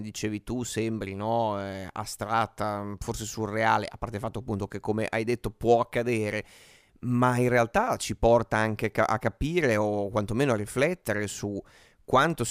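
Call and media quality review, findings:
No audible faults found.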